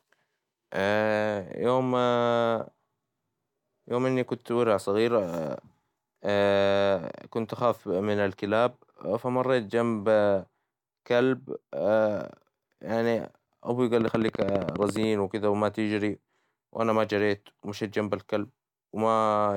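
Something in the chain, likely electrical interference from nearby equipment or a faulty connection or power supply, injects a regular burst of pulses into this speech recording, producing a train of clicks from 14.01 to 15.04 s. The clicks arrive evenly at about 14.7 per second, roughly fifteen in all, each with much the same sharp shape and peaking around 10 dB above the surrounding audio. They are heard as a fast, steady ticking laid over the sound.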